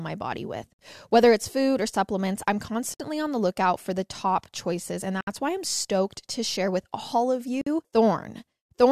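At 0.73 s after "my body with", at 2.94 s after "food or supplements I'm", at 5.21 s, and at 7.61 s after "share with all of", the speech stops for about 51 to 66 ms: a gap at a join of encoded pieces, where encoder start delay and final-frame padding stayed in. Unlike a dropout, nothing is lost; the speech resumes exactly where it stopped, with smeared edges.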